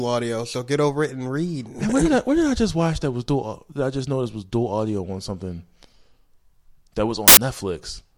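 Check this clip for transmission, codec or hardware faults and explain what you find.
There's one fault here, right near the end. From 7.28 to 7.37 s, roughly 90 ms, the speech turns into a burst of loud, harsh broadband noise: samples built from the wrong bytes. For that stretch the reader is putting each sample's bytes together wrongly, off by a byte or in swapped order, so the jittery low-order bits end up as the big part of every value. The result is harsh noise that swamps the speech until normal decoding picks up again.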